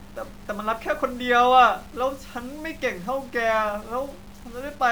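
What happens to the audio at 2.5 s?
At 2.5 s the speech carries the low bit depth without dither heard across the whole clip, from start to end. A grainy, rough distortion rides on the voice, growing harsher as the level falls and tracking each sound rather than sitting as a steady hiss. The likely cause is samples truncated to about 7 bits with no dither, so the rounding error follows the waveform, landing roughly 30 dB below the signal.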